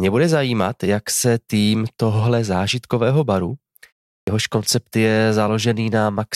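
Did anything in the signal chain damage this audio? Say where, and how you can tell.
Yes. Playback caused a clipped start after a pause. At 4.23 s, "jehož koncept je" begins abruptly, its first 44 ms gone. The output device woke late after 0.39 s of silence.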